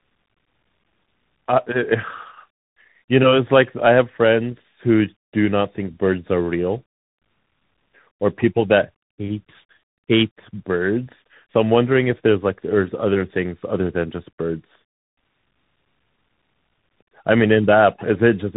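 Throughout the speech, tandem speech coding is audible. The call passed through AMR-NB, then G.711, then CVSD, and each stage re-coded the previous stage's already damaged output. Nothing survives above 3.8 kHz. Unlike a plain band limit, the sound is also rough and warbly.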